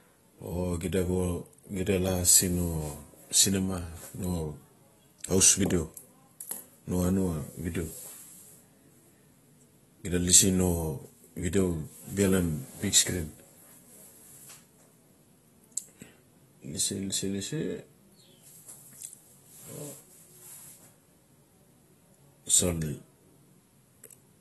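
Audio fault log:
Throughout, AAC compression: the speech sounds dull and smeared, with nothing above about 12 kHz, and sibilants and sustained sounds carry a warbling, fizzy texture. This is likely AAC-LC coding at a low bitrate, which fits roughly 32 kbps. With so few bits per frame, the encoder lowers its cut-off and quantises the remaining frequency lines coarsely. It leaves gaps in the spectrum or fills them with substitute noise, and that is what smears the detail audibly.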